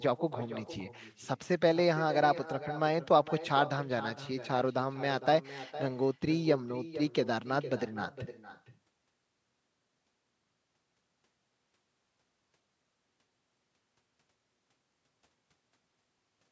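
From start to finish, the talker's speech is trailed about half a second later by a fainter, thinner copy of itself, roughly 14 dB below the original and band-limited to nothing above 8 kHz like the call itself. This is echo with no canceller: the far end played the call through a loudspeaker, its microphone recaptured that sound, and with nothing subtracting it, the voice returned after the full network round trip.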